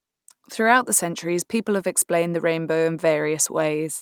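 No technical faults are audible.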